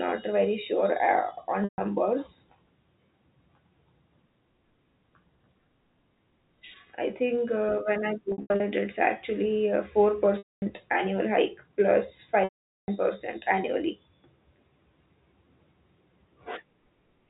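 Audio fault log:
1.64–12.88 s, packet loss with pitch repetition: dropouts at 1.64 s (140 ms), 8.32 s (200 ms scattered over 280 ms, after "think uh when I"), 10.38 s (240 ms, before "annual hike plus") and 12.44 s (440 ms). The repeated last pitch period holds as a buzz, fading to silence on longer gaps.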